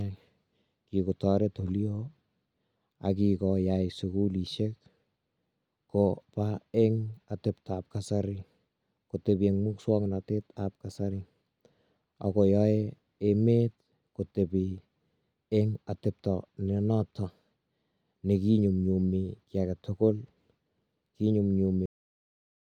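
At 21.86 s the speech stops abruptly mid-sound and falls straight into digital silence, with no decay, for the remaining 0.87 s. This is a cut-off end: the final stretch of audio was never written out or played, so the recording simply ends there.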